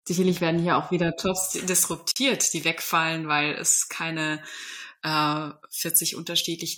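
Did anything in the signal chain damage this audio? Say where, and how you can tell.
Yes. Pre-emphasis left on from 1.54 s: a J.17 treble boost, about 11 dB at 10 kHz, lacked its matching de-emphasis, so speech turns thin and sibilant.

Gap at a join of encoded pieces at 2.11 s: a 47 ms gap with smeared edges, from codec start delay and last-frame padding left untrimmed where separately encoded pieces were joined.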